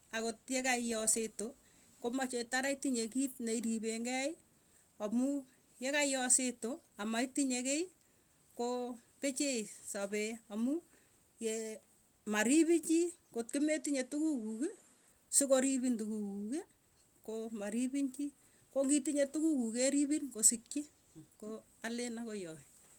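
From 13.50 to 15.09 s the speech loses its top end, with nothing above 12.2 kHz, and a faint new noise floor comes in. It's likely the input switched to a poorer device, with no gap at the change and the level barely moving.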